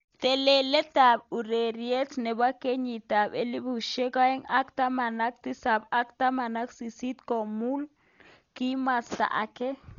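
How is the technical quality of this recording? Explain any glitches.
The technical quality is poor, with heavy coding damage throughout the speech. Dolby Digital compression is the likely cause: the band stops at about 6.9 kHz, which fits a bitrate near 40 kbps, and starved frequency lines are replaced with noise, so the sound is dull and rough with a fluttering texture.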